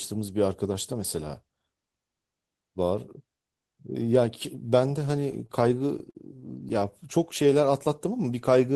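From about 5.11 to 6.17 s there's a repeated stall (stutter): packets kept arriving late, so the jitter buffer ran dry eight times, and the receiver stretched the last sound to cover about 135 ms in total, the longest gap around 50 ms. Nothing drops out, but the speech hiccups and drags.

Then from about 7.18 to 7.73 s you get a jitter buffer slow-down. The buffer was short on reserve, so it repeated pitch periods to add about 48 ms, playing that stretch at 92% speed with unchanged pitch, so sounds come out drawn out.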